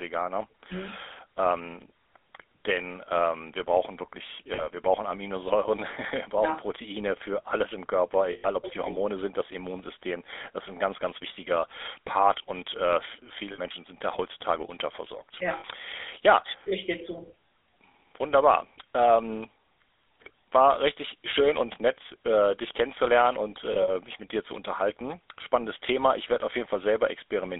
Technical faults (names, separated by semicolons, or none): GSM full-rate codec; lost GSM frames